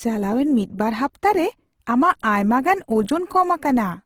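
Opus compression is audible from start to finish. Its likely cause is the Opus codec in its CELT music mode at a low bitrate, consistent with about 16 kbps. Starved bands are refilled with folded or noise-like content, so the speech sounds rough and grainy, though its bandwidth still reaches about 20.2 kHz.

Pre-echo occurs at 2.19 s. A sharp onset lands late in a transform block, and the quantisation noise sized for that loud attack spreads back into the quiet moment before it. The result is a brief hiss of about 10 ms just ahead of the attack, which itself sounds softened and smeared.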